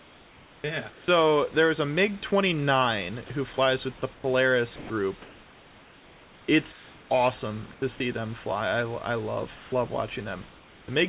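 From 0 to 1.08 s, before "there is a", comfort noise in place of the background covers about 820 ms: the real room noise, about 26 dB below the speech, gives way to smoother synthetic noise of a different character. This is likely discontinuous transmission, where the sender stops sending in pauses and the receiver fills the gap. Within that stretch, at 0.61 to 0.64 s, the onset clipped by the voice detector removes 30 ms, so the sound starts abruptly without its soft beginning while synthetic fill plays in its place.

From 3.26 to 7.82 s, ending before "see them", the sound is chopped by the voice detector. The sending gate likely toggled repeatedly, and about 2020 ms in total is replaced by comfort noise, leaving two or more holes.

From 9.56 to 10.88 s, comfort noise again replaces the background, about 560 ms in all. At its end, 10.86 to 10.88 s, another 20 ms onset is clipped, giving a second abrupt start. 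Across the clip nothing is heard above 4 kHz, consistent with a narrowband 64 kbps G.711 A-law call path.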